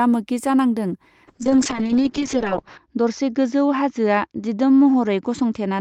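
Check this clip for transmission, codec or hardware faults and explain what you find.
One transmission fault: a call bitrate drop from 1.31 s to the end. The bandwidth estimate collapsed, so the encoder coded the speech far more coarsely, consistent with a fall from about 32 kbps to roughly 6 kbps, and narrowed the audio from 20 kHz to 8 kHz. It sounds rough, watery and muffled, bottoming out for 1.48 s. Unlike packet loss, there are no gaps or glitches, only a sustained loss of quality.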